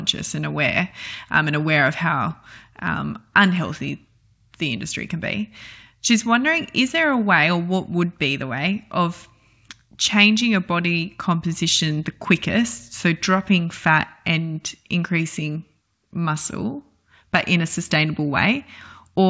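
No technical faults can be heard in this speech, so there is nothing to describe in time order.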